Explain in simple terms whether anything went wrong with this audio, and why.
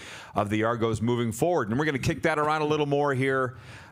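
Nothing went wrong with this audio, because no faults can be heard anywhere in it.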